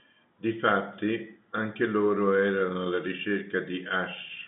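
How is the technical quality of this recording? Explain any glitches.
The technical quality of this speech recording holds up, with no glitches to explain in its G.711 telephone-band sound.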